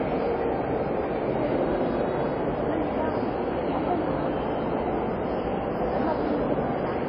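From start to end the sound has nothing above 11.9 kHz, a flat spectrogram ceiling, likely from low-bitrate audio saved at a high bitrate, with the MP3 unable to restore what was lost.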